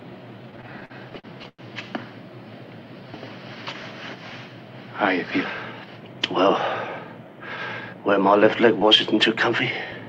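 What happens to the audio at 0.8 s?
That moment falls inside a stretch of repeated stalls (stutter) running from about 0.51 to 1.62 s. Packets were arriving late, so the jitter buffer kept running dry, twelve times in that span. Each time, the receiver stretched the last bit of sound to cover the wait, fading it on the longer holds, the longest about 102 ms. Nothing is actually lost, but roughly a quarter of that stretch is filler, so the audio drags and stutters.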